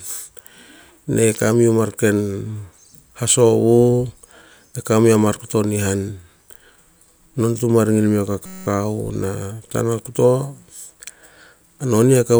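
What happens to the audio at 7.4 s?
At 7.4 s the speech carries on intact, with no dropout, click, distortion or other fault at that moment.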